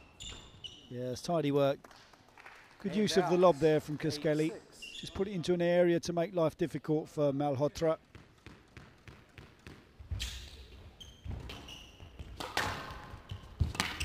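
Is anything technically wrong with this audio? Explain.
Yes. From 8.96 s to the end there is sample clock jitter: timing wobble of roughly 7 µs scatters each sample, adding slope-dependent error about 20 dB down. It's a roughness that swells on loud, bright passages and disappears in silence, unlike a steady noise floor.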